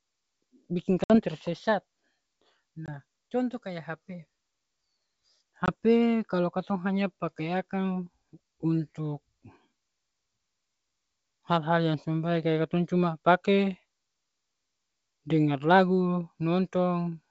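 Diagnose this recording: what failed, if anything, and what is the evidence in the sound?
Packet loss on the network feeding an ADPCM decoder (G.722 at 64 kbit/s) shows up as hard-edged silent holes at 1.04–1.16 s (about 60 ms lost, a few packets), 2.86–2.89 s and 5.66–5.70 s (20 ms each). After each gap the speech returns slightly distorted, settling within tens of milliseconds. A plain buffer underrun would resume cleanly. This recovery tail is the decoder's predictor and step size re-converging with the sender's.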